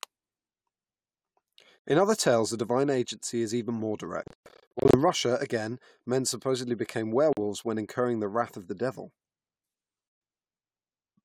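The speech cuts out four times in short silences, likely a Bluetooth dropout. Packets arrive too late and are discarded, so nothing plays. At 1.87 s, just before "other tales the divine", about 84 ms of sound is skipped. After "agency is even more", from 4.23 to 4.97 s, gaps are scattered over 700 ms, totalling 434 ms, the longest 126 ms. From 7.33 to 7.38 s falls a 42 ms hole, between "again men supposedly became" and "when incurring the wrath". From 10.09 to 10.21 s comes a 126 ms silence. Each time, the speech resumes further on, as if it had kept playing.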